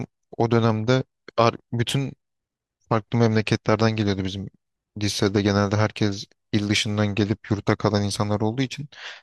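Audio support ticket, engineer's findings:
No faults found in this speech recording. Nothing in the signal path calls for action on this ticket.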